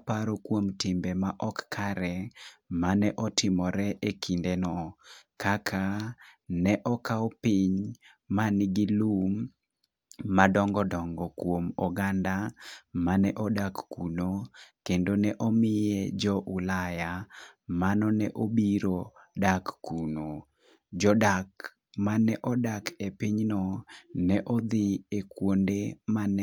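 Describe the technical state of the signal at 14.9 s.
At 14.9 s the speech signal is intact, with no audible fault at that moment.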